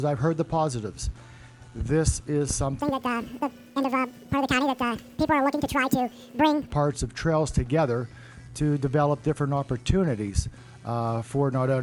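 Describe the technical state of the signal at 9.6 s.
At 9.6 s the signal is intact, with no dropouts, clipping, glitches or other faults audible at that point.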